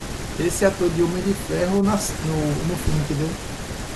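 A speech recording with no audible technical faults.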